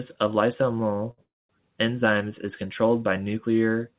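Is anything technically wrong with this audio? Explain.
Yes, there are two timing faults in this speech, both heard through a call codec whose band stops at 4 kHz, which fits 64 kbps G.711 A-law.

A short stall from a late packet occurs at 1.11 to 1.21 s. A packet arrived late and the jitter buffer emptied, so the receiver stretched the last sound for about 67 ms, then resumed from the same point. Nothing is lost, but a sound hangs on with a faint buzz or dip.

A call audio freeze follows at 1.24 to 1.52 s, likely caused by packets held up in transit draining the jitter buffer again. The last sound is continued briefly as a fading buzz or hiss, then about 210 ms of silence, roughly 256 ms inserted in all, before speech resumes where it stopped with nothing missing.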